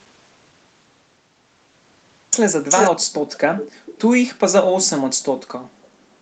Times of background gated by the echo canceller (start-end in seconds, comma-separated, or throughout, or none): 5.51-6.21